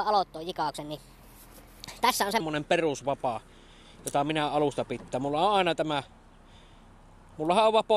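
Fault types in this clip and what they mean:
Section at the wrong speed, 0.0 to 2.4 s: the opening stretch runs about 1.27 times faster than it should, so everything in it sounds hurried and lifted in pitch by roughly four semitones, with timing and pitch shifting together rather than separately. At 2.4 s the audio drops back to its natural rate and register. The likely cause is that this segment was played out or resampled against the wrong clock rate.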